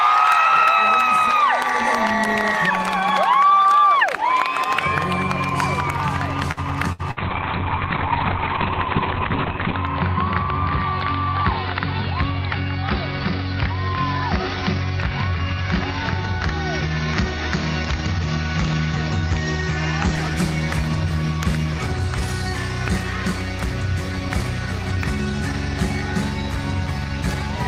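Audio with two network faults. From 6.51 to 7.20 s there is repeated packet loss with robotic sound: three short holes in quick succession, the longest about 66 ms, each patched by stretching the preceding sound, so about a quarter of that stretch is synthetic fill. It sounds choppy. On a waveform the fills look like smooth, repetitive segments, and on a spectrogram they appear as smeared, unnaturally regular harmonics. Right after that, from 7.16 to 20.21 s, a call bitrate drop takes hold. The encoder is starved of bits after the bandwidth estimate falls, which fits a fall from around 32 kbps to around 6 kbps, and the coarser coding makes the sound rough and watery while the top end is cut. The worst of it lasts about 2.6 s. On a spectrogram, energy that had reached 20 kHz stops sharply at about 4 kHz, a flat ceiling that lifts again once the bitrate recovers.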